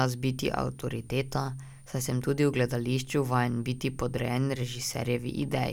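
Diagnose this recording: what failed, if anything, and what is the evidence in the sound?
The analogue stage failed: a switching supply whistle runs under the speech throughout. A faint high tone drifts between about 8.66 and 9.25 kHz, roughly 35 dB below the speech. A switching power supply is running in an audible burst mode or beating with another supply, and its noise is leaking into the audio path.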